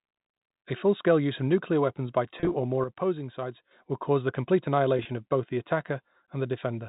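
Packet loss with pitch repetition hits at 2.40 to 2.54 s and 4.97 to 5.05 s. Scattered gaps, totalling 80 ms then 40 ms, were filled by repeating the last pitch period, so the speech briefly turns held and buzzy within the narrow telephone band.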